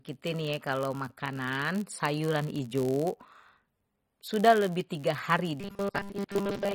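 A speech recording with three faults. Throughout, it carries plainly audible MP3 compression, most likely from a low bitrate on the order of 32 kbps. The treble stops dead at a fixed frequency, and the weaker frequency lines flicker in and out between frames, giving a watery, swirly texture with metallic chirps on sibilants and smeared onsets. On a spectrogram this shows as a hard horizontal ceiling with patchy, speckled gaps in the upper bands. Also throughout is a block size mismatch (padded): each block handed downstream is short and topped up with silence, so a tiny gap recurs 91.5 times a second. That produces a steady 91.5 Hz buzz under the speech and stretches the audio to 0.996 times normal speed, about 0.4 percent slower, with pitch essentially unchanged. On a waveform the dropouts appear as regular notches about 10.9 ms apart, and on a spectrogram as evenly spaced thin vertical stripes. 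From 5.60 s to the end at 6.74 s, the speech turns into robotic sound from repeated short buffers, likely because new audio arrived too seldom and the last 5 ms was replayed to fill the gaps, discarding most of the real signal. The repetition imposes a rigid 200 Hz metallic buzz that loosely tracks the speech, seen on a spectrogram as strong flat harmonics at multiples of 200 Hz and on a waveform as identical repeating cycles.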